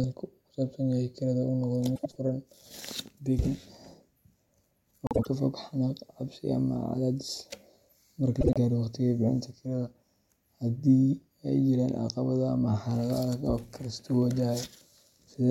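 Speech with three brief stretches of frames out of order, at 1.95–2.16 s, 5.06–5.27 s and 8.41–8.57 s. Two adjacent blocks of about 78 ms each in the first two cases, and about 52 ms in the third (consistent with runs of three and two frames), play in exchanged order. The result is a garbled flutter. Unlike a dropout or repeat, nothing is missing or doubled, and timing stays intact.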